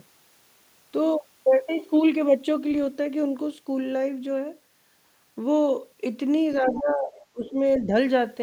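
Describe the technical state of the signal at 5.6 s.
At 5.6 s the speech signal is intact, with no audible dropout, distortion, noise burst or other fault at that moment.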